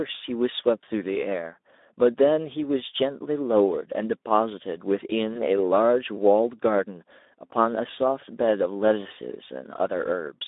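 Speex codec damage runs through the whole recording. The sound is narrowband, held between about 250 Hz and 3.7 kHz. It is plainly degraded, which fits a Speex setting near 11 kbps. At that rate the codec has too few bits to model the excitation well. The speech comes out noisy and hoarse. Nothing is carried above the telephone band.

At 5.33 s a packet loss concealed by the speech codec breaks in, lasting until about 5.43 s. About 20 ms of audio went missing, which fits a single lost frame. The decoder filled the gap by repeating its last pitch and filter with falling gain. That gives a short stretched sound in place of real speech. Each frame builds on the previous one, so the sound stays weak or distorted for nearly 0.1 s in total before it recovers.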